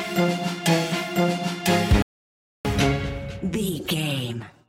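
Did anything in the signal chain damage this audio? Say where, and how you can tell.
Yes. At 2.02 s the sound drops to silence, then picks up at 2.65 s exactly where it left off, with nothing missing. That's a rebuffering stall at the playback stage: the player's buffer ran dry and waited for more data, adding about 0.63 s.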